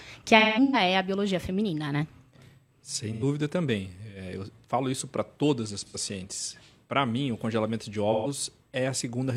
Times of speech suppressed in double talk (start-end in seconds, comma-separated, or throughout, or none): none